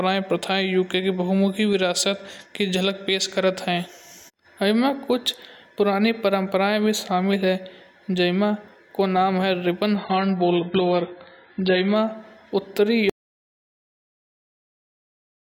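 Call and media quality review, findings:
Adaptive stream at a lower bitrate, 9.96 to 11.96 s. Speech abruptly turns dull and swirly, with nothing above 5.1 kHz and metallic codec artefacts. It switches back cleanly, with no gap at either edge. Probable component: ABR player and CDN rendition switch. The player dropped to a low rung after a throughput dip, and the sound points to a move from roughly 96 kbit/s to about 12 kbit/s AAC. On a spectrogram, a hard horizontal ceiling near 5.1 kHz appears for 2 s, with smeared, blocky texture below it.

Audio dropout to silence, 13.10 s through to the end of the clip. Speech cuts off mid-flow and never returns, and the room tone disappears with it. Probable component: capture input or upstream link, likely a disconnected device or a stray mute. The encoder kept writing silence for the remaining 2.5 s. On the waveform this shows as a flat line, and on the spectrogram as near-black with no room tone.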